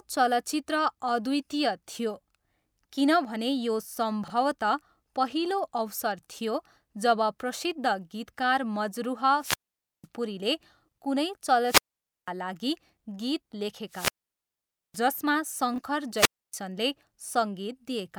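Chunks out of order at 4.24 to 4.30 s: a 20 ms slice of the speech plays two chunks late, after material that should follow it. Nothing is missing, but the shuffled segment creates three abrupt joins, heard as a tiny jumbled stutter.

Wireless microphone squelch dropout at 9.39 to 10.07 s, then again at 11.64 to 12.30 s and 13.89 to 15.03 s: the radio link weakens, hiss swells, and the receiver's squelch shuts the output. This leaves holes of near silence lasting 0.5 s, 0.5 s and 0.86 s before the speech returns.

Chunks out of order recurs at 15.74 to 15.78 s, with a 20 ms chunk landing one position late. It produces a brief scrambled moment.

Wireless microphone squelch dropout occurs a final time at 16.14 to 16.53 s. Rising hiss precedes a 0.28 s mute as the signal fades below the squelch threshold and then recovers.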